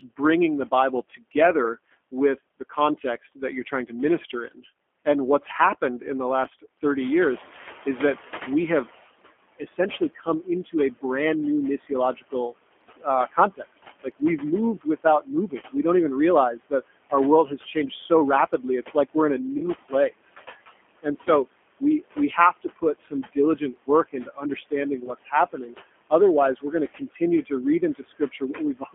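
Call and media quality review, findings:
Noise suppressor artifacts, whole clip: the suppressor pulls steady background down by about 18 dB between phrases and releases it under speech. The result is pumping. Room noise rises about 12 dB near 7 s.

G.729 codec, whole clip: a low-rate CELP voice codec, consistent with 8 kbit/s G.729A, rebuilding speech from a filter, a pitch predictor and sparse pulses. Plainly audible rough, synthetic texture. The band is limited to about 250 Hz to 3.4 kHz, with no highs and a thin bottom end.

Speech cut by the noise suppressor, in seven stretches: 1.16–5.06 s, 9.59–11.04 s, 11.88–12.33 s, 12.96–14.22 s, 14.81–15.75 s before "don't even", 16.53–19.16 s before "we're in a", and 19.89–28.94 s. The suppressor misreads speech as noise, with drops of about 11 to 21 dB. Parts of the speech sound swallowed or faint.

VoIP packet loss concealed by the speech codec, at 19.58–19.65 s just after "we're in a" and at 25.06–25.11 s. 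Each fits a single lost 20 ms packet. The decoder extrapolates the last pitch and filter with falling gain, producing a brief smeared fade and a weak recovery afterwards.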